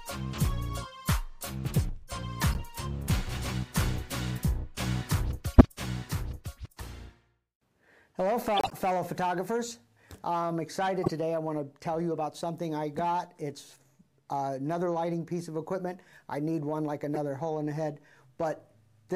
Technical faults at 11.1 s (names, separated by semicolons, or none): corrupt frame decoded